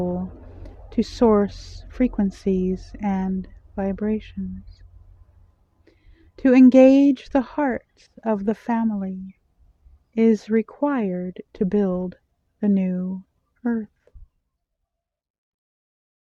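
Nothing stood out on listening, and the sound eases away in a smooth fade over roughly the last two seconds.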